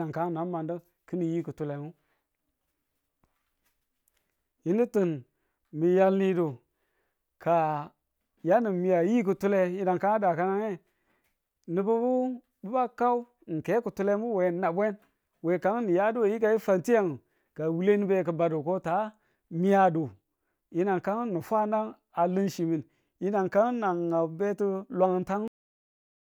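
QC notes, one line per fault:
25.48–26.38 s, cut-off end: the speech stops abruptly at 25.48 s, in the middle of a sound, and the final 0.9 s is flat digital silence. There is no natural decay, breath or room tail, so the ear hears the sound severed instead of finishing. This points to the last stretch of audio never being written to the file or sent to playback, leaving the closing buffers empty.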